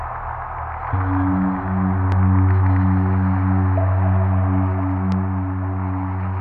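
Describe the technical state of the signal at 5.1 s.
A single loud pop lands at 5.12 s and lasts until about 5.15 s. It rises a few decibels above the surrounding sound, which continues underneath. The likely cause is a sudden voltage pulse, from a plug, switch, static or driver glitch, entering the signal path.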